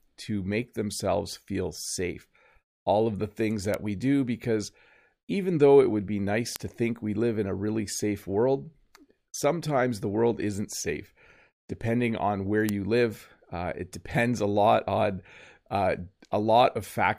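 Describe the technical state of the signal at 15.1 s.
At 15.1 s the speech signal is intact, with no technical fault present at that moment.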